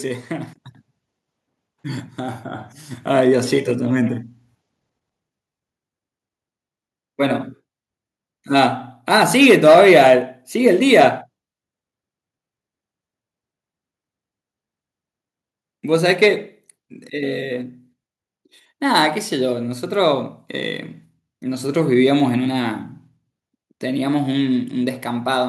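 No dropouts, clicks, distortion or level jumps turn up anywhere in the recording; nothing to flag.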